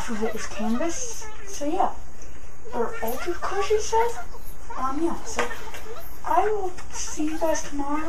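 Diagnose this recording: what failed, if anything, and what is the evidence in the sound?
Nothing failed here: the audio holds steady all the way along with no audible sign of trouble at any stage of the chain.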